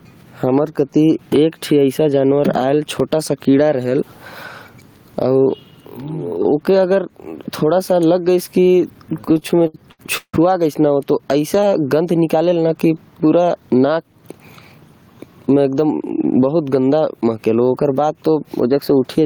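Gain pumping runs through the whole speech clip. The level swings by about 15 dB. Loud and soft passages sit close together and sound squashed. The likely cause is excessive microphone gain with a fast limiter clamping down.

From 9.21 to 10.35 s there are repeated stalls, a stutter. The jitter buffer kept running dry as packets arrived late. Fifteen gaps were filled by stretching the last sound, 420 ms in total, the longest 164 ms. Nothing is lost, but the speech drags and stammers.

From 13.60 to 14.14 s comes a jitter buffer speed-up. Too much audio had built up, so short pitch-period pieces were cut, about 70 ms in all. The speech plays at 112% speed with unchanged pitch. It sounds briefly hurried.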